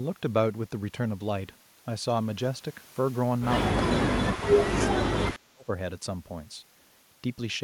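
An echo canceller likely clamped down while both ends talked at once, producing speech suppressed in double talk: from 3.75 to 4.48 s the speech sinks by about 30 dB, then again from 4.91 to 5.7 s by about 35 dB, nearly cutting out.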